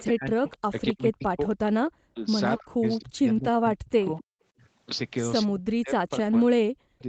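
From 0.00 to 1.71 s there is an echo leak: a faint, delayed copy of speech trails the main talker by 264 ms, sitting around 25 dB below the direct voice. The likely cause is a loudspeaker on the far end whose echo canceller failed to remove everything its microphone picked up, so the residue came back down the line. Unlike room reverberation, which smears the sound continuously, this is a distinct second copy at a fixed lag.

Overlapping that, from 0.07 to 1.41 s, comes speech suppressed in double talk. With both sides talking at once, the canceller likely could not separate its own talker from the loudspeaker echo and pulled both down. The talker's voice dips hard, by something like 40 dB at its deepest, for roughly a second in total. Packet loss concealment tends to produce buzzy or repeated fragments. Here the voice instead sinks in step with the overlapping talk, then recovers.

At 4.35 to 4.41 s the background is gated by the echo canceller. 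It clamped the microphone hard while the loudspeaker played, and the room sound drops by about 32 dB for a brief moment before returning. It reads as a quick hole in the ambience, not a full dropout of the signal. The limit near 8 kHz from the Opus call path carries on straight through it, and the short length and clean return show the canceller letting go.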